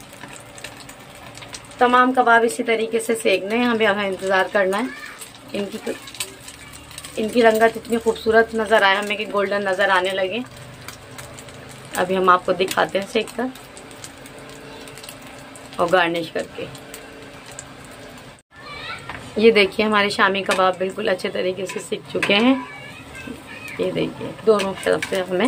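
Nothing goes wrong anywhere in this recording; there's no technical fault to point to at any moment.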